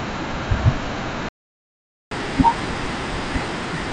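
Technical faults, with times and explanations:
1.29 to 2.11 s, playback stall: the speech stops mid-flow and the output goes completely silent for about 0.82 s before resuming. The gap is too long and too clean to be a pause in the talking; the likely cause is that the player ran short of buffered data or its output thread was held up, so it had nothing to send until the supply recovered. The wideband G.722 quality is unchanged on either side of the gap.
2.11 s to the end, catch-up at higher speed: once sound returns, the speech runs at 1.25 times normal speed, and its pitch rises with it by roughly four semitones, which makes the voice sound hurried and noticeably higher. This is the player working off the backlog left by the stall, resampling the queued audio so that it plays faster and wins back some of the lost time. Because the speed-up is done by resampling rather than by time-stretching, pitch and tempo go up together.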